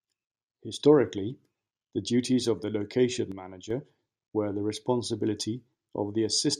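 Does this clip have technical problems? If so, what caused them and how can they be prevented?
Yes. One channel drops out, likely through a brief loss of one side of the stereo feed, from 0.64 to 0.80 s and from 3.32 to 3.70 s. In the mono sum the speech suddenly falls by about 6 dB there. Securing stereo cabling and connectors and monitoring each channel's level separately prevents this.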